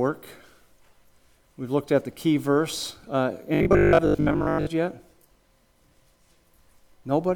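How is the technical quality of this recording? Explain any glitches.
The recording has one clear glitch: a stretch of robotic sound from repeated short buffers between 3.55 and 4.69 s. Throughout that second or so, the sound turns into a rigid, metallic buzz locked at 50 Hz. The likely cause is that new audio arrived too seldom, so the playback kept repeating a chunk about 20 ms long, which fits a 20 ms buffer, while the real material was skipped. Roughly two-thirds or more of the stretch is repeated audio. On a waveform, the span shows an identical short shape tiling every 20 ms. On a spectrogram, it shows evenly spaced horizontal harmonics at multiples of 50 Hz.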